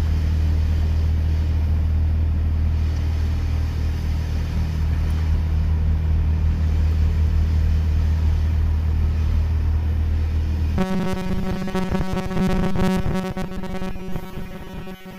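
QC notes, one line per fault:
10.78–15.18 s, robotic sound from repeated short buffers: a rigid, metallic 188 Hz buzz on the sound, likely a roughly 5.3 ms buffer replayed while most new audio is skipped.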